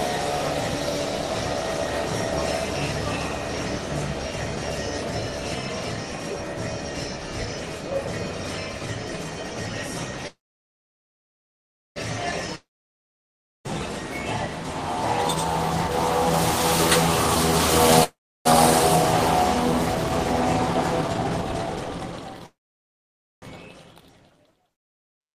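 At 10.27 s a call audio freeze sets in, likely because packets were held up and the jitter buffer ran dry. The receiver stretches the last sound into a brief fading buzz, then about 1.6 s of near silence until 11.98 s, when the audio resumes exactly where it stopped. Nothing is lost, but the whole stream now sits roughly 1.7 s later.

From 12.31 s to 15.91 s a jitter buffer speed-up follows. With the buffer now holding more than its target, the receiver trims short pitch-period slices repeatedly, running the audio about 4% fast at unchanged pitch and discarding roughly 150 ms in total. Inside that stretch, from 12.53 s to 13.87 s, a jitter buffer slow-down also acts, repeating small pieces to rebuild reserve, about 46 ms added, so the audio briefly drags to around 97% speed with a drawn-out quality.

Overlapping that, a long network dropout runs from 12.55 s to 13.67 s, likely a stretch where no packets arrived at all. 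A short fading tail gives way to about 1 s of silence, and the audio returns with roughly 1.1 s of material gone for good.

A second freeze at 18.04 s to 18.47 s inserts a fading gap of about 0.3 s of silence, adding around 0.4 s of delay without losing anything.

A much stronger speed-up from 19.55 s to 23.94 s races the audio at about 127%, shedding roughly a second to claw back delay, and it sounds noticeably hurried. Within it, a third freeze from 22.46 s to 23.44 s stalls the audio into about 0.9 s of silence before it picks up from the same point.

Finally, a second long network dropout from 24.73 s to 25.22 s, likely another packet outage, fades into about 0.46 s of silence, and roughly 0.48 s of audio never plays.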